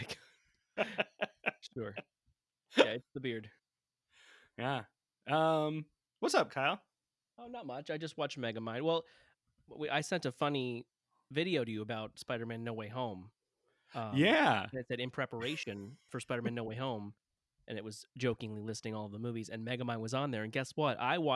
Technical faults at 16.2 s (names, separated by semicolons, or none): none